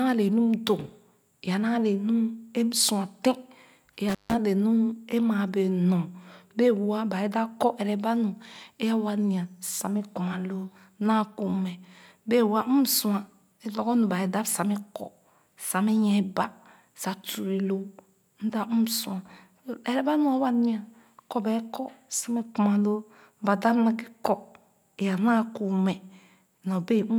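Intermittent contact appears from 4.09 to 4.34 s, where a loose cable or plug briefly loses its connection partway through the speech. The signal path opens for about 152 ms, so the sound drops out abruptly instead of fading, and the make-and-break of the contact leaves crackle at both edges of the gap. While the line is open, faint hiss remains before the connection closes again and the sound resumes.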